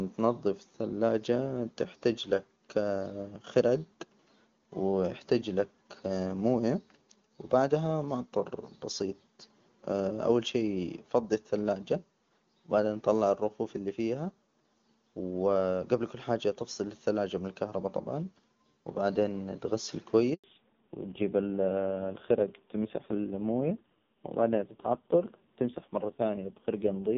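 At 20.34 s, right after "الكهرباء طبعا وبعدين تغسل", a handover gap cuts the speech to silence for 100 ms while the call switches networks and no frames arrive. From 20.44 s to the end, a fallback to narrowband removes everything above 4 kHz, leaving the speech duller and rougher, consistent with a drop from HD Voice to a low-rate AMR narrowband mode.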